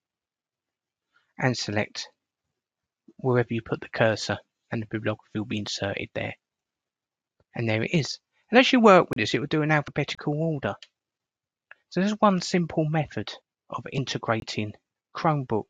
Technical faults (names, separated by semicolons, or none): compressed frames skipped; block of digital silence